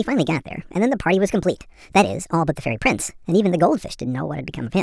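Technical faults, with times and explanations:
Throughout, wrong sample rate: the speech runs 1.5 times too fast and sits about 7 semitones high, giving a hurried, chipmunk-like quality, which fits audio recorded at 16 kHz being played at 24 kHz without conversion. Speed and pitch rise together because every sample is simply read out sooner. On a spectrogram, harmonics and formants are stretched upward by the same 1.5 factor. The waveform shows syllables and pauses compressed in time.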